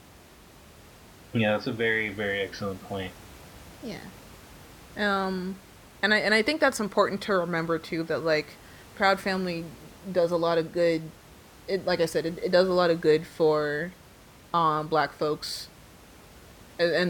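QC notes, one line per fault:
No faults found in this speech recording; the only background is the room's own ambient noise, sitting about 24 dB below the voice.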